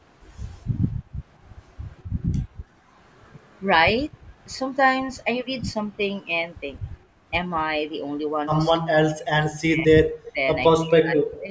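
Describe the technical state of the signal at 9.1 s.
At 9.1 s you're right in the middle of a stretch of speech suppressed in double talk, running from about 8.74 to 9.43 s. The speech dips hard, down by something like 40 dB at its deepest, for roughly half a second in total. That's likely an echo canceller that couldn't tell the near talker from loudspeaker echo while both sides spoke, so it pulled everything down. The call microphone processing's band limit at 8 kHz shows up here as well.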